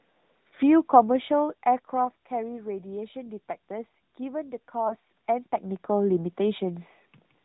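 Speech heard through an AMR narrowband mobile codec throughout: nothing passes above 4 kHz, and the voice has a plainly audible buzzy, synthetic edge. That edge points to a mid-range AMR mode near 10.2 kbps. This is codec damage rather than simple low-pass filtering, which would dull the voice without adding that buzz. Between 4.88 and 4.96 s there is a lost AMR speech frame. The decoder repeats the last good pitch and vocal tract settings at falling gain, so the sound gives a brief warbling dip, which fits a single 20 ms frame. A dropout would instead cut to silence, and a run of lost frames would stretch and fade rather than recover this quickly.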